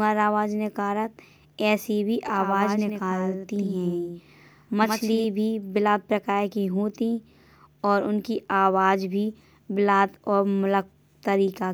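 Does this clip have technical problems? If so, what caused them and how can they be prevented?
Yes. From 2.28 s to 5.24 s, between "ऐसे भी" and "भी बिलात प्रकार की", the speech has a doubled audio track: a second full-band copy trails the original by around a tenth of a second at roughly 5 dB lower, likely from a slower capture path or an edit leaving two copies out of step. On a spectrogram every onset appears twice, evenly spaced, with no decay smear, and in the waveform the copy starts and stops abruptly. To prevent it, route each source through a single capture path and check edits for leftover overlapping duplicates.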